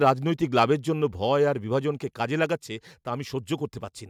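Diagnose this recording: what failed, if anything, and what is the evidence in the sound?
The fault sits at the converter input stage. Between 0.07 and 0.10 s, near the start of the clip, the loudest peaks turn harsh and crackly. The sound breaks up briefly, then clears. The likely cause is microphone overload. The input level drove the signal about 2 dB past the converter's maximum. The tops of those waveform peaks were cut flat, clipping around 5 percent of samples in that short stretch. That flattening adds the gritty distortion.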